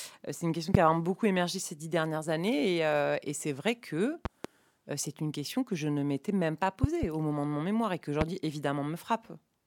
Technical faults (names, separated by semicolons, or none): loud pop